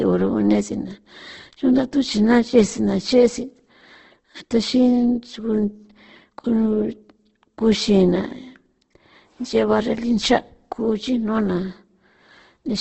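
A speech recording, with Opus compression damage throughout. Nothing is heard above about 8.2 kHz. The speech sounds rough, grainy and noisy. That suggests the encoder likely rebuilt thin bands from folded or noise-filled energy at a very low rate, around 12 kbps.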